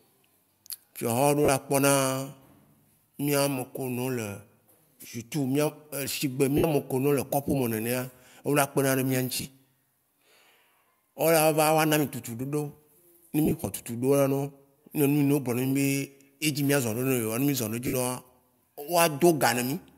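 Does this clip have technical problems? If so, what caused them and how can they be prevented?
Yes. Lost LE Audio frames at 1.45, 6.57, 9.36, 13.45 and 17.87 s, each 30 to 60 ms: the LC3 decoder refilled each gap with the last spectrum under random signs, smearing the speech into brief noise. Keeping the Bluetooth link close and clear of interference prevents this.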